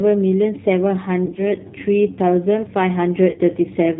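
The speech runs through a G.729 codec at 8 kbit/s, rebuilding it from a filter and sparse pulses, so it sounds plainly rough, synthetic and dull above 4 kHz. From 1.26 to 1.42 s and again from 3.30 to 3.41 s, VoIP packet loss concealed by the speech codec stretches the sound into fading buzzy or noisy smears. The gaps sound scattered, in runs of up to about 30 ms, consistent with roughly 70 ms and 60 ms of missing audio respectively.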